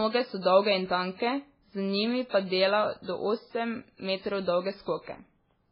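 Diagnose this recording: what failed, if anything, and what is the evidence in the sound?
The codec stage most likely failed: heavy MP3 compression at a starved bitrate degrades the speech throughout. The encoder runs so short of bits that it discards everything above 5.3 kHz, leaving the audio dull. It also zeroes weak frequency lines that flicker on and off between frames, producing a watery, swirling texture and metallic chirps on s sounds. Damage this severe fits a bitrate of about 16 kbps.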